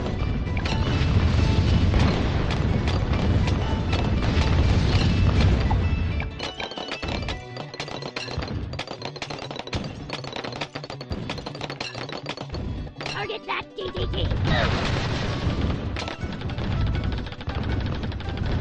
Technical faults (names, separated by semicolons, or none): filter restarted on every block